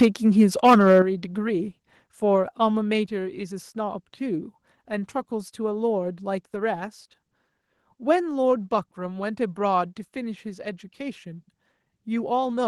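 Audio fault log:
0.01–0.06 s, microphone overload: the input gain was likely set too high, driving peaks about 4 dB past the converter's ceiling, so roughly a tenth of samples have flattened tops, giving the opening onset a brief harsh, crackly edge.
0.02 s, microphone volume stepped down: the call software likely reacted to that clipped peak by cutting the device's input volume in one step, about 3 dB, so the sound and its background drop together abruptly rather than fading.
0.39–1.0 s, microphone overload: the input stage was likely still running hot, pushing peaks about 9 dB over full scale; a smaller share of samples is clipped, but the deeper flattening makes the loudest syllables sound gritty and distorted.
1.02 s, microphone volume stepped down: right after that distorted stretch, automatic gain control likely lowered the microphone input again, by about 8 dB this time, producing a sudden drop in overall level, background included.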